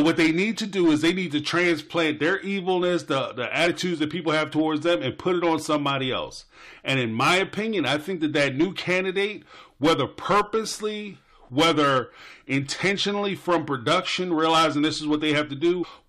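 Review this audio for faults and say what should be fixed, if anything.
Compressed frames skipped at 3.66 s and at 15.83 to 15.85 s: whole frames never reached the output, so the audio jumps ahead by roughly 20 ms and then about 100 ms. Fix with integrity checks and error-concealing decoding.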